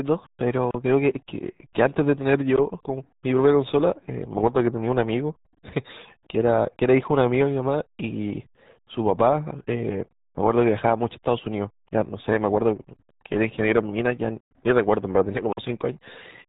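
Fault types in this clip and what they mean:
RealAudio 14.4 codec: Throughout, the speech is heavily muffled and gargly, with nothing audible above about 3.8 kHz, which fits RealAudio 1's 8 kbit/s dial-up speech coding discarding the upper band and crudely modelling what remains of the voice.
Block of digital silence: From 15.53 to 15.57 s, the speech drops abruptly to dead silence for about 46 ms and snaps back with no fade. The hole's length fits a 2048-sample buffer left unfilled, zeroed instead of receiving audio.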